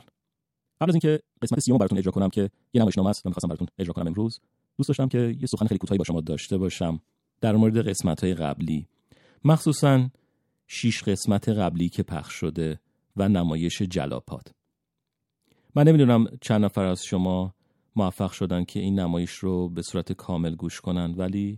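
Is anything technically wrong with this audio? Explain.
Yes. From 0.0 to 6.18 s the speech plays as a time-stretched section, running at 2.0 times its natural pace while its pitch stays put. The likely cause is software squeezing this stretch to fit a shorter length, preserving pitch by discarding short slices of the waveform rather than resampling. Because pieces are dropped, the speech sounds rushed, and the pace changes abruptly where the section ends at 6.18 s.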